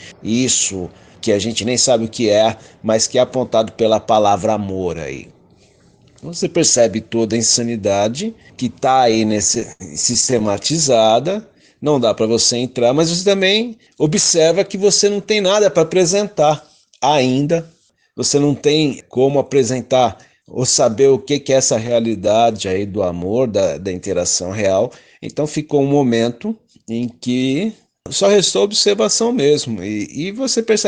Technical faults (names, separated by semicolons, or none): repeated stalls (stutter); jitter buffer slow-down; jitter buffer speed-up